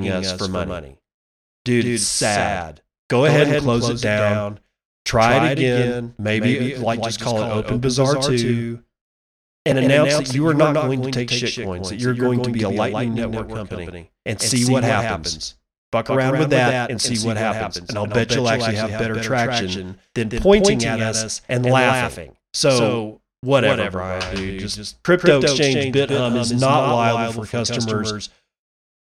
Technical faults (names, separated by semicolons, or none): doubled audio track